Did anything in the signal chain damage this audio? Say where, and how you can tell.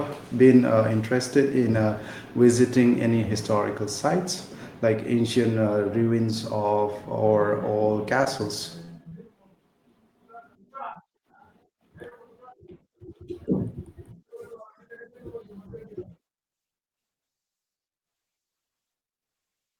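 Yes, the damage happens at the network stage, on the receiving side of this speech call.

A short stall from a late packet occurs at 8.38–8.41 s. The last sound is held for about 15 ms, then the speech resumes exactly where it stopped, so nothing is lost. Playback simply runs 15 ms later afterwards. That is the jitter buffer running dry and waiting for the packet.

Short concealed packet loss occurs at 8.85–8.90, 9.09–9.13, 10.93–10.97 and 12.09–12.13 s. Each time, 20 ms of real speech is missing and is patched with 18–25 ms of synthesised continuation. This produces a brief smear or wobble and can clip a consonant. Unlike the stall, material is actually gone.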